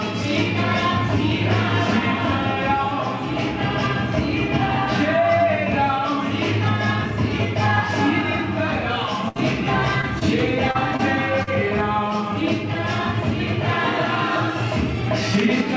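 At 9.28 s the sound suddenly holds, a brief frozen stretch lasting until 9.37 s that sags in level before the audio jumps ahead with a small piece gone. This is a burst of packet loss. A run of packets never arrived in time, so the receiver extended the last sound it had for about 70 ms and faded it down, and about 80 ms of the original sound was skipped when playback resumed.

From 10.01 to 11.49 s the sound turns choppy, with five short stumbles scattered through the stretch, none longer than about 41 ms. This is repeated packet loss giving a robotic sound. Packets dropped out again and again, and each hole was patched by stretching the preceding sound, about 140 ms in total. Only around 9% of the span is patched, so the damage is intermittent rather than continuous. Through all of this the band stops at 8 kHz, which fits G.722 at 64 kbps on the call path.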